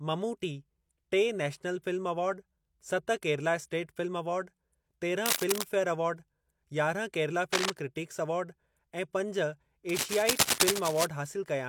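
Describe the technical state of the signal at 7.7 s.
At 7.7 s the signal is just leaving a burst of cable scratch noise running from 7.52 to 7.70 s, between "फे़यर अवार्ड यारहं केरला" and "क्रिटिक्स अवार्ड ऐं पंज". Dense, uneven scratching sits over the speech at roughly equal level, likely from a worn cable or connector being moved.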